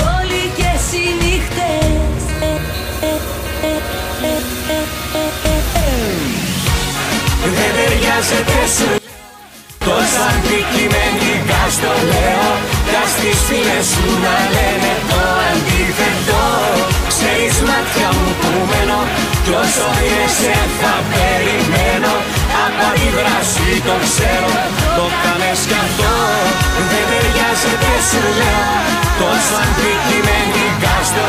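From 8.98 to 9.81 s the sound collapses by about 22 dB into a faint remnant with its centre gone. This is the one channel inverted fault: one side's polarity was likely reversed, so the shared content cancels when the channels are combined.

From 14.36 to 15.45 s everything runs fast and sharp, speeding up by 5.52% and rising 93.1 cents, just under a semitone. This drift correction step likely came from clock-matching software abruptly changing the playback rate to rebalance its buffer.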